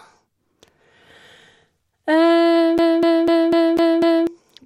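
From 2.78 s to 4.27 s, a quarter-second snippet stutters six times with brief mutes between, a CD stuck on one turn: the laser keeps jumping back one track.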